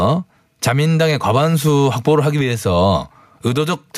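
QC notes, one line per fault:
Throughout, gain pumping: the level drops by around 10 dB each time the speech gets loud, so the level breathes and the dynamics sound flattened. This is likely input gain set far too high, with a fast limiter or compressor clamping each peak.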